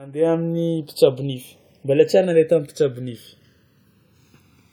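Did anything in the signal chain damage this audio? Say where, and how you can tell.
Yes. The fault is channels drifting apart, present from start to finish at the converter stage, where the two channels come from devices running on independent clocks. Their rates differ by something like 150 ppm, so the offset between left and right grows steadily, reaching about a millisecond by the end. Summed to mono, that sliding delay makes comb-filter notches glide slowly through the spectrum, which is heard as a gradual flanging sweep over the speech.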